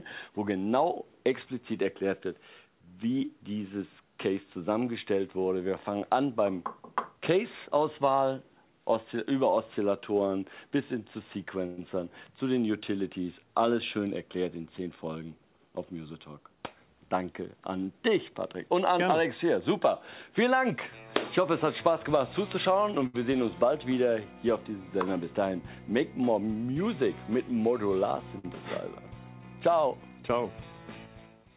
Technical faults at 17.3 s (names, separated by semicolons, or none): none